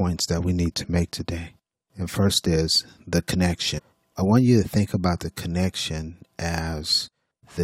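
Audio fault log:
3.77 to 3.80 s, damaged data in a compressed stream: right after "first is the" and before "I want you to", the speech is briefly disrupted for about 20 ms. Corrupted bytes in the encoded stream made the decoder misread that stretch and lose frame sync until it found a valid header again.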